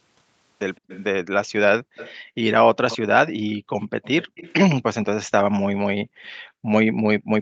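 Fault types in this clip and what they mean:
Echo leak, 0.76–1.04, 1.96–2.15, 2.90–2.98 and 3.81–5.05 s: a faint second copy of the speech trails it by 161 ms, about 25 to 15 dB quieter. This is likely loudspeaker sound reaching a microphone and slipping past its echo canceller.
Background gated by the echo canceller, 1.82–2.37, 3.65–3.70, 6.09–6.67 and 7.19–7.31 s: the room sound drops by up to about 40 dB for brief moments as the canceller clamps the microphone while its loudspeaker plays, then returns when it releases.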